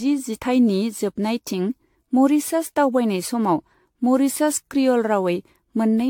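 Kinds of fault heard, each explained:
Generation loss: the speech sounds swirly, smeared and hollow throughout, with blurred consonant attacks and nothing above 19 kHz, most likely from AAC-style re-encoding around ten times, each pass quantising on a shifted frame grid and stacking noise and spectral holes beyond what a single encode would cause.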